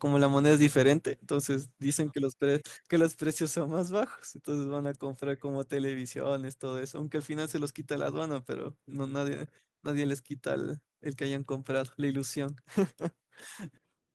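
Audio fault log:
0.24–0.89 s, microphone overload: The loudest peaks in this stretch are flattened, giving a harsh, crackly edge on the strongest syllables. The signal reaches about 2 dB beyond what the converter can represent, so the tops of those waveforms are sheared off and replaced by flat segments that generate added harmonics. Only a small fraction of samples, under one percent, are affected, so the distortion is brief bursts rather than constant grit. The likely cause is microphone input gain set too high.
1.02 s, microphone volume stepped down: The speech and the background noise beneath it drop together by about 4 dB in a single abrupt step, shortly after the distorted stretch ends. Because both fall at once rather than fading, the change sounds like a level switch rather than the talker moving away. This likely comes from the calling software detecting the overload and cutting the device's input volume in one move to stop further clipping.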